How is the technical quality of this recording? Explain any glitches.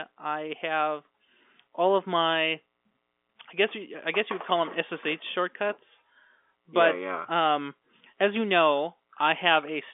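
Nothing stood out on listening: the speech comes across with the narrow, telephone-band character of an ordinary phone line and no glitches to point to.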